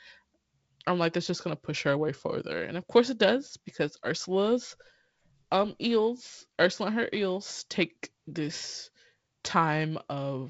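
Nothing's wrong with this speech clip: it comes through G.722 wideband telephone coding at 48 kbit/s, with the band topping out a little under 8 kHz and a faint codec hiss, which is just what that link sounds like when it's working as it should.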